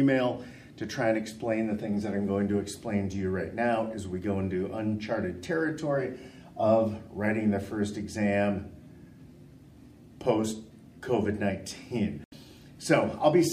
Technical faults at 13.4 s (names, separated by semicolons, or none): none